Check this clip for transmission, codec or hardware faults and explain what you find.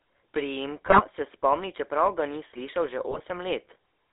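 The clip has two faults: a GSM codec coloring the whole clip, plus two bursts of bit errors.

GSM full-rate codec, throughout: regular-pulse excitation drives a vocal-tract model, which fits a 13 kbps coder, leaving buzzy, gravelly speech confined to roughly 300 Hz to 3.6 kHz.

GSM bit errors, 0.86 to 1.03 s and 3.10 to 3.20 s: corrupted filter, pitch and gain parameters across several frames distort the decoded speech into brief squawks, pops and gargling.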